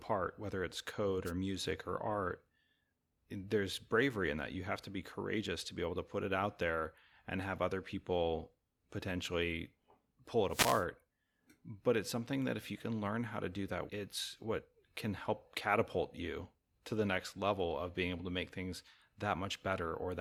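Wireless microphone noise hits the speech at 1.25–1.32 s, after "whether it's code", and 10.49–10.85 s, after "other people potentially pull". The radio signal fades, so receiver static swishes in briefly.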